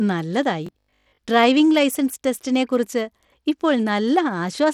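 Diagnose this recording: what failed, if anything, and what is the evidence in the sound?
At the codec stage, the speech carries plainly audible Bluetooth SBC compression from start to finish. The treble drops out and flickers, with gritty noise riding on it, which fits a starved bit pool near 96 kbps, likely SBC. A simple low-pass would sound dull but clean, not gritty.

In the buffer or driver stage, from 0.67 to 1.21 s the speech turns into a rigid, metallic 50 Hz buzz: robotic sound from repeated short buffers. That pitch fits a 20 ms block being replayed, likely for most of that stretch. Dropouts would leave gaps instead of this fixed tone.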